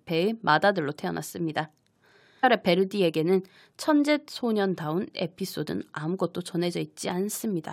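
At 2.43 s the speech jumps abruptly forward with a brief blip, and the flow breaks as if part of the programme is missing. This is most likely a stream segment skipped: one chunk of the segmented stream failed to arrive and the player carried on with the next. On a waveform the envelope changes suddenly at that instant, with a tiny spike at the join. A spectrogram shows a thin vertical broadband line where the harmonic patterns fail to connect.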